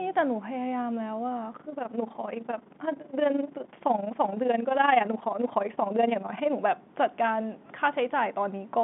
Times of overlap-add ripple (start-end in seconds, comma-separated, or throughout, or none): 1.54-6.56